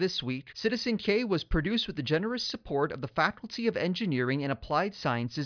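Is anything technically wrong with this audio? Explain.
No, nothing in this speech recording stood out as technically wrong on listening.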